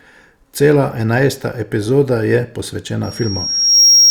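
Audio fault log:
3.03 s to end of clip: loudspeaker feedback squeal. A single tone near 5.6 kHz appears behind the speech and swells over roughly three-quarters of a second until it sits about 10 dB above the program level, holding there to the last sample. The microphone is picking up its own loudspeaker, and at that frequency the loop gain exceeds unity, so each pass round the loop reinforces the tone until the system's limits cap its growth.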